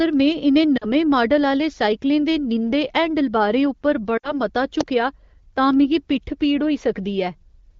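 Lost AMR speech frames occur at 0.78 to 0.86 s and again at 4.17 to 4.40 s. Radio errors corrupted the frames, so the wideband decoder stretched the last good pitch and vocal tract settings with falling gain. About 40 ms, then about 60 ms, of speech smears and drops to near silence within two frames before the voice returns weak or rough for a moment.

An electrical switching spike lands at 4.81 s as a sharp snap laid over the speech, just after the second dropout. It is likely an arc from a nearby switch, motor or static discharge coupling into the audio line.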